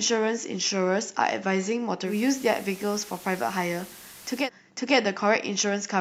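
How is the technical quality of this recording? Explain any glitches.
The quality takes a clear dip in the middle, where there's one glitch: digital radio blending to analogue. From 2.04 s to 4.50 s the receiver loses the digital stream and cross-fades over about 124 ms to the FM broadcast of the same station, then fades back. The loudness stays level, so there's no jump, but while it's on FM a steady hiss sits around 20 dB below the speech. It clears once the digital signal returns.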